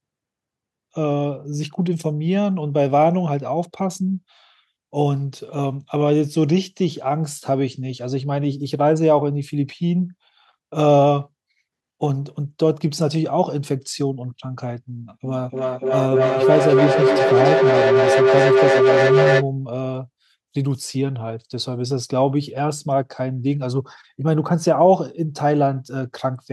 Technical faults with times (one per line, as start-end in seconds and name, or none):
15.24-19.50 feedback howl